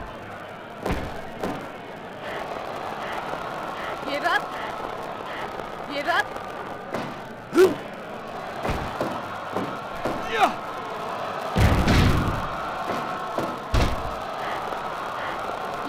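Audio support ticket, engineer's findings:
Filter restarted on every block, throughout. Steady 200 Hz buzz tracking signal level. Probable component: block-based filter stage losing state between blocks, each block starting from silence and emitting a small transient. Repeat rate points to 5 ms processing blocks.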